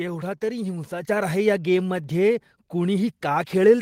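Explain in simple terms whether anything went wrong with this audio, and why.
At 1.02 s the microphone volume stepped up. The software raised the input level in one jump, so voice and background both get louder just before "आहे ह्या".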